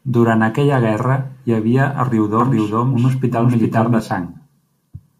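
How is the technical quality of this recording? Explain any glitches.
The recording has one clear glitch, a doubled audio track. From 2.4 to 4.0 s, a second copy likely arrives over a slower capture path, trailing by roughly 0.4 s at about equal level, clean and undecayed, starting and stopping abruptly.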